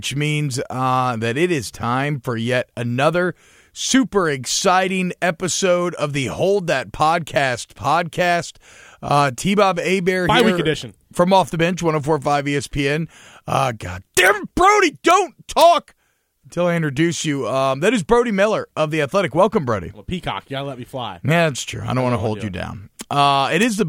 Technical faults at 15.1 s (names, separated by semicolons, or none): integer overflow